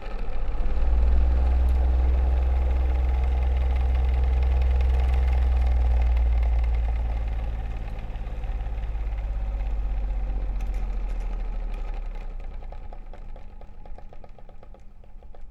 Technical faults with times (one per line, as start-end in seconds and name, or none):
none